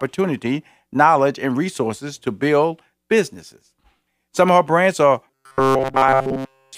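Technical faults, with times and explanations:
5.28–6.77 s, robotic sound from repeated short buffers: after "of her brands are", a rigid 133 Hz buzz, likely a 7.5 ms buffer looping over skipped audio.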